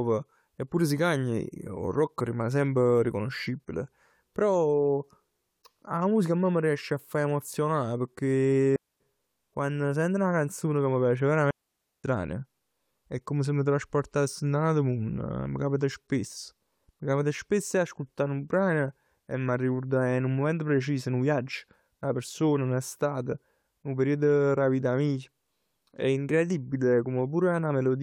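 A digital wireless dropout interrupts this speech clip twice: the radio link loses too much data, so the receiver mutes with a very short fade. It leaves clean near-silent holes, with no noise burst, at 8.76 to 9.00 s (about 245 ms, just before "quann sent 'na canzon") and 11.51 to 12.04 s (about 533 ms).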